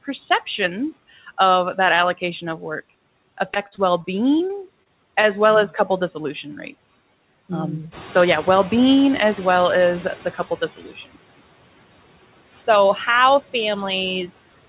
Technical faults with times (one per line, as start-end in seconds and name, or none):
0.00-14.69 noise suppressor artifacts
3.54-5.25 repeated packet loss (robotic sound)
7.91-10.40 noise suppressor catching up
10.76-11.16 speech cut by the noise suppressor
14.27-14.38 speech cut by the noise suppressor